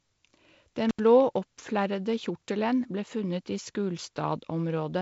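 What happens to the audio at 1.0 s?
An intermittent contact breaks the speech from 0.89 to 1.00 s. A loose connection opens for about 77 ms, so the signal drops out abruptly. Crackle marks each edge of the gap. A faint hiss remains while the line is open.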